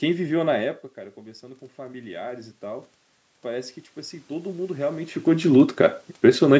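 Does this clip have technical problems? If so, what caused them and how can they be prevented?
Yes. From 1.75 to 5.2 s, the speech and the room noise behind it swell up together, slowly rather than in a jump. This is automatic gain rising. After the speech level at the microphone fell by about 15 dB, the call's gain control judged the input too quiet and raised its gain by about 10 dB over several seconds. To prevent it, keep a steady distance from the microphone.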